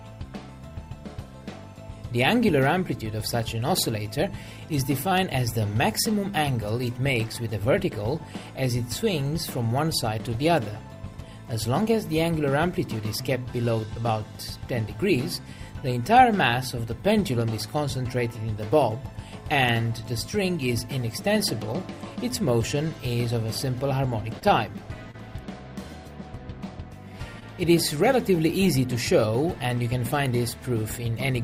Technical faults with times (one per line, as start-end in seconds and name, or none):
24.39-24.43 short concealed packet loss
25.11-25.16 short concealed packet loss
27.40-27.43 short concealed packet loss